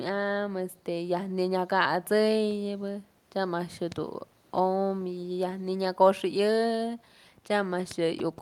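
A speech recording, and nothing is technically wrong with it.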